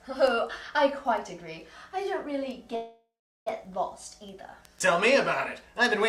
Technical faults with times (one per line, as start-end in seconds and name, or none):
2.75-3.48 call audio freeze